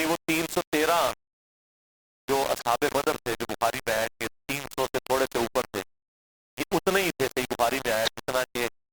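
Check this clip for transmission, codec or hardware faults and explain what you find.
Two faults are audible in this speech: coarse quantisation across the whole clip and three short bursts from damaged codec frames.

Low bit depth without dither runs from start to finish. The speech sounds harsh and grainy, with the grit rising and falling with the voice rather than sitting as steady hiss. The error sits only around 10 dB below the signal, which fits rounding to about 3 bits with no dither. On a waveform the trace looks staircased into a handful of flat levels. A spectrogram shows broadband distortion tracking each syllable, with no separate noise floor.

Corrupt frame decoded occurs three times: 2.57 to 2.62 s, 4.79 to 4.86 s, and 8.05 to 8.10 s. Each is a brief chirp or burst that doesn't belong to the speech, produced when a decoder played frames whose bits were damaged and placed energy at wrong frequencies. 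The first two span a couple to a few frames and peak near -20 dBFS. The last, a single frame, is louder, near -10 dBFS. A spectrogram shows short vertical blocks of misplaced energy, and the waveform shows abrupt irregular spikes.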